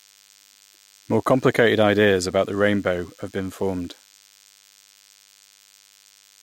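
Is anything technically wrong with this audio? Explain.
Yes. DECT cordless phone buzz runs through the whole speech clip. A DECT handset or base station close to the recording chain transmits a brief radio burst every 10 ms, and some part of the audio circuit demodulates that energy, turning each burst into a click. Those clicks repeating at 100 Hz form a thin, steady buzz rich in harmonics, sitting about 35 dB below the speech.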